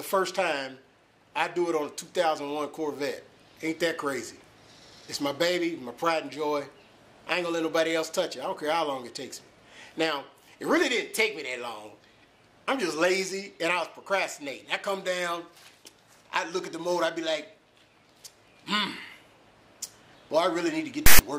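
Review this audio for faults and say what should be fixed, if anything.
At 21.06 to 21.19 s, near the end of the file, there is a hard-edged burst of loud rasp, about 0.13 s long and offset to one side: file tags played as audio. A block of text metadata is being decoded as if it were sample data. The player or converter should parse the container and skip tag blocks rather than reading everything after the header as samples.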